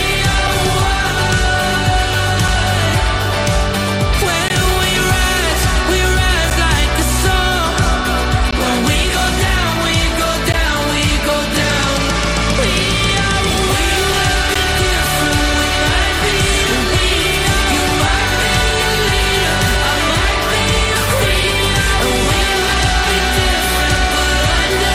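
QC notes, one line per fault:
0.47, 4.48, 6.50, 8.51, 10.53, 12.54 and 14.54 s: gaps between stream segments, hard-edged silent holes of 3 to 17 ms at segment joins, which fits 2-second segments whose timestamps don't quite meet.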